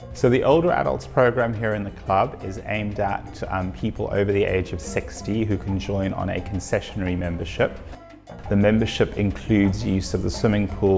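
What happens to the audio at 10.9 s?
Nothing goes wrong at 10.9 s; the audio there runs through without any audible fault.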